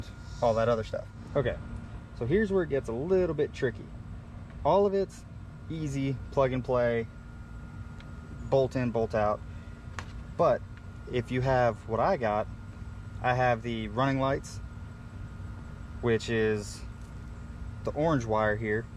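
No technical faults can be heard anywhere in the recording, and the signal keeps a steady, intact character throughout.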